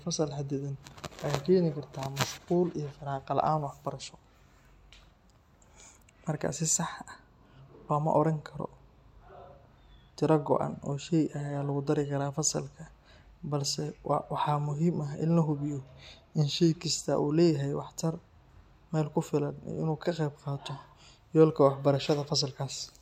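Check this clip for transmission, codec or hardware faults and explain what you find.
One fault stands out in this speech clip. Drift correction step, 15.78 to 16.75 s: the speech slows 5.6% and drops 99 cents, about a semitone, then snaps back. The likely cause is clock-matching software changing the playback rate to rebalance its buffer.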